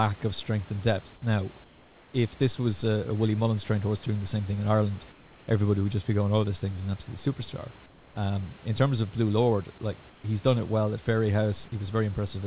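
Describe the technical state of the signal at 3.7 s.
At 3.7 s the signal is intact, with no fault at that moment.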